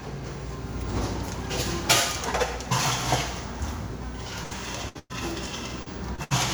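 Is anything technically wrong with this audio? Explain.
Yes, the audio has packet loss in its last two seconds, both as longer bursts and as brief concealed dropouts.

Burst of packet loss at 4.43 to 4.53 s, 4.89 to 4.97 s, 4.99 to 5.14 s and 6.24 to 6.32 s. Between 60 and 100 ms of audio failed to arrive each time, and the receiver extended the last sound while fading it. The result is a held, decaying smear, after which the sound resumes with a section skipped. The 4.99 s burst also goes silent for about 40 ms before recovering.

Short concealed packet loss at 5.83 to 5.88 s and 6.16 to 6.20 s. About 40 ms and then 20 ms went missing. The decoder bridged each hole by continuing the preceding sound and blending back into the real signal. These register as quick smears or wobbles rather than clear gaps.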